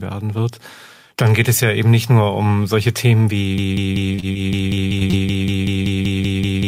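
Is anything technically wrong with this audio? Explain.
Yes, the speech has three kinds of fault, all in its second half.

Broken-record loop, from 3.58 s to the end: a 0.19 s fragment repeats exactly, back to back, for about three seconds. The player or stream likely stalled and kept resending its last buffered piece, so the speech that should have followed is lost.

Short concealed packet loss, around 4.15–4.25 s and again at 4.33–4.37 s: brief holes of about 20 ms each were filled by extending the preceding sound and blending back. This is heard as tiny smears or wobbles inside the looping passage.

Repeated packet loss (robotic sound), from 4.75 to 5.15 s: several holes, the longest about 21 ms, arrive in quick succession, covering roughly a fifth of that stretch. Each patch continues the last sound before the next gap arrives, giving a choppy texture with missing fragments.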